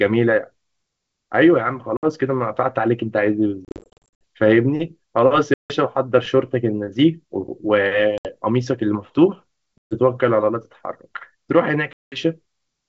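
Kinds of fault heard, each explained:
Packet loss on an ADPCM call: six hard-edged gaps, worst around 3.65 to 4.24 s, then slightly distorted speech while the decoder's predictor catches up.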